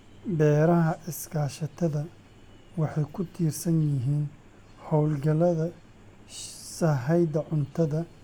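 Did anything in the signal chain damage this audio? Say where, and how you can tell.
No, nothing in the signal chain stood out as damaging this speech on listening.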